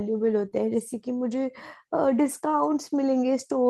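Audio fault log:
0.45 s and 2.49 to 2.55 s, lost packet rebuilt from error correction: the sound stays continuous, but 20 ms around 0.45 s and 40 ms from 2.49 s are coarser and grainier. This fits one lost packet, then two separate ones, each replaced from a low-bitrate copy carried in the following packet. On a spectrogram the harmonics look blurred, with a noise haze between them. The waveform shows no gap or dropout.
0.49 to 0.53 s, short concealed packet loss: about 20 ms of audio never arrived in time, and the decoder covered it for 17 ms by extending the preceding sound before crossfading back into the real signal. It is heard as a brief smear or wobble just after the first rebuilt section.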